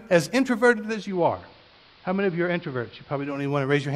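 At 0.83 s the speech slides over a 360 ms cross-fade into the AM analogue broadcast of the same station, a digital radio blending to analogue. The hybrid receiver has lost its digital signal. The level drops by about 2 dB, and a steady hiss sits well below the speech. At 3.51 s it blends back to digital. The gradual fade in and out, together with the added hiss, sets this apart from a codec simply narrowing its bandwidth.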